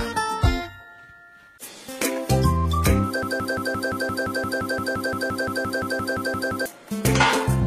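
A broken-record loop runs from 3.23 s to 6.66 s: a fragment of about 0.17 s repeats exactly, back to back, 20 times, giving a rapid mechanical stutter rather than continuous sound. The likely cause is a stall in the playback, encoding or streaming chain, which kept delivering the last fragment it held in place of new audio. Whatever should have played across those roughly 3.4 seconds is missing.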